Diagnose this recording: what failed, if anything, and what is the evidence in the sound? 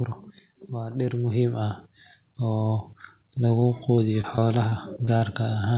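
The automatic gain rising fault sits in call processing, at the AGC stage. From 0.73 s to 1.89 s the level climbs by about 5 dB. The speech and the background noise swell together, over a little more than a second. That shared, gradual rise is the evidence. The gain controller judged the input too quiet and stepped its gain up slowly, lifting everything in the signal at once.

Repeated packet loss, heard as robotic sound, comes from the network. It runs from 3.48 s to 5.23 s. About a dozen short holes break the speech, the longest around 40 ms, with roughly 180 ms of audio missing in total. The jitter buffer patched each hole by extending the last sound, about 214 ms of filler altogether. The result is choppy, robotic speech. The telephone-band sound, with nothing above 4 kHz, fits G.711 A-law at 64 kbps.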